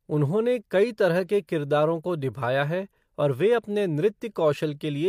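Speech recording with no audible technical faults at any point.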